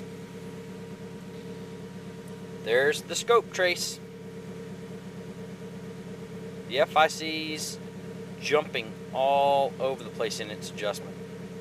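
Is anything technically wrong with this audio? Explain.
No, nothing technically wrong can be heard in this audio. There is nothing in it that needs correcting.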